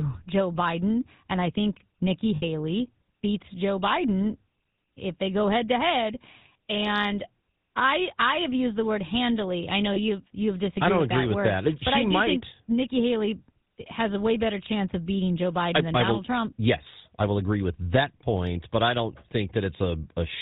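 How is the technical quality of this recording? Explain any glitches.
The recording has a coarse, band-limited quality throughout, with two brief glitches.

Across the whole clip the speech sounds buzzy and gravelly, with nothing above 4 kHz. This is the GSM full-rate codec, whose plainly audible roughness fits a 13 kbps stream. It rebuilds the voice from a vocal-tract model excited by sparse, regularly spaced pulses.

At 2.36–2.43 s and again at 9.94–9.98 s, between "word handily I know" and "you've disagreed I don't", the sound briefly freezes into a rough, metallic ring. These are lost GSM frames. The decoder repeats the last good frame's settings, and the gaps point to roughly 60 ms and 20 ms of missing data.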